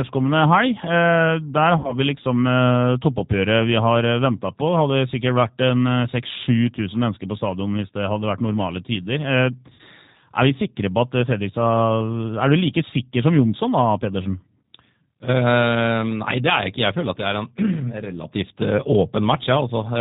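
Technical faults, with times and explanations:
Throughout, G.729 codec: the speech is carried at 8 kbit/s, which fits the G.729A variant, and the damage is plainly audible. Nothing above 4 kHz survives, so it sounds muffled, and since every 10 ms frame is rebuilt from a filter, pitch guess and a few pulses, it comes out rough and a bit synthetic.
1.78–1.95 s, VoIP packet loss concealed by the speech codec: about 60 ms of audio went missing, and the decoder filled the gap by stretching its last pitch and filter into a fading buzzy tone or coloured noise. Recovery is slow because each frame leans on the one before, so the speech stays weak for a moment afterwards.
9.74–9.82 s, VoIP packet loss concealed by the speech codec: a shorter gap of about 50 ms gets the same treatment. The last bit of sound is drawn out and fades, then the speech takes a beat to come back to full strength.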